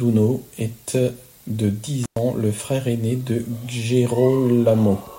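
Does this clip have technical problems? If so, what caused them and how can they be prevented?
Yes, there's an intermittent contact fault in this speech clip, from about 2.04 to 2.18 s, right after "est de" and just before "ans le frère aîné". A loose cable or plug briefly loses its connection, so the signal drops out for roughly 105 ms, with crackle as the contact breaks and remakes and faint hiss in the gap. To prevent it, check and reseat connectors before recording and swap out any worn or wobbly cables.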